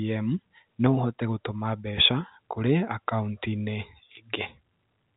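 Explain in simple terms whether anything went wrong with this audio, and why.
Nothing went wrong with this audio; it just has the narrow, slightly muffled sound of an ordinary telephone line, which is normal for phone-quality recordings.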